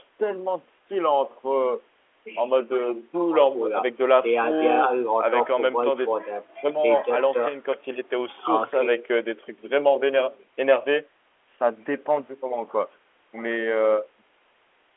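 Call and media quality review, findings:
No faults found: narrowband telephone speech consistent with G.711 A-law, content confined to roughly the 300 Hz to 3.4 kHz line band with nothing above 3.8 kHz, and the call microphone's bass roll-off as expected.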